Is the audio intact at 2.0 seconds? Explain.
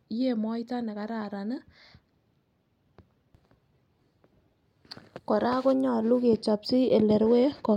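Yes, the speech at 2.0 seconds plays through cleanly, with no dropout, click, distortion or other technical fault at that moment.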